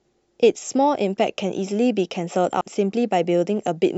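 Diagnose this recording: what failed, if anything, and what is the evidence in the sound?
The codec stage dropped compressed frames. At 2.61 s the speech jumps ahead, losing around 150 ms, which fits a few 32 ms frames missing from the file or rejected by the decoder.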